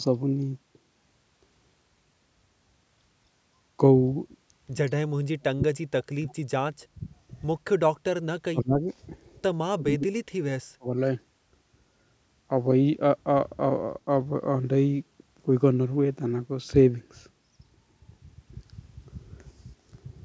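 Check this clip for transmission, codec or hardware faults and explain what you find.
One fault recurs: speech suppressed in double talk. The talker's level collapses from 4.88 to 7.03 s, 7.71 to 7.76 s, 8.47 to 8.85 s and 9.72 to 10.96 s. It drops by up to about 40 dB. An echo canceller likely mistook overlapping speech for echo and attenuated it.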